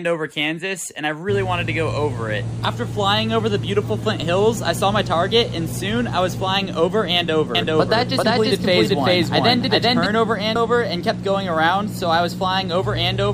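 A doubled audio track runs from 7.55 to 10.06 s: a second, full-band copy of the sound trails the original by roughly 0.4 s at about the same level, with no decay or room colour. It begins and ends abruptly, likely because a slower capture path fed the same signal in again. Damaged data in the compressed stream breaks through at 8.22 s and again at 10.54 s as a brief chirp or blip, where the decoder misreads corrupted frames, loses sync and searches for the next frame header.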